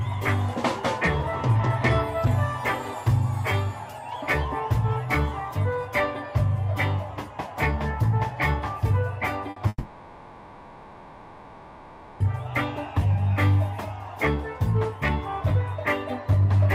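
At 9.50 s a burst of packet loss cuts in, lasting to 9.59 s. About 60 ms of audio never arrives. The receiver stretches the last sound across the hole and fades it. A brief buzz or hiss results, then playback resumes with that piece gone.

From 9.68 s to 12.23 s comes a long network dropout, likely a stretch where nothing reached the receiver. The last sound is carried on for about 2.5 s, fading as it goes. A short silence follows. The audio then returns, skipping everything in between.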